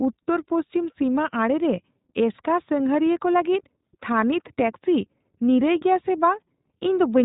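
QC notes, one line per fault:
Throughout: iLBC codec, with nothing above 3.8 kHz and a plainly rough, synthetic speech texture from excitation coded independently in each 20 ms frame.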